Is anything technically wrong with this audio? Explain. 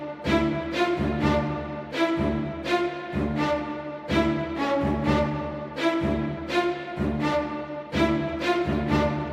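No, there's nothing technically wrong with this audio that I can point to.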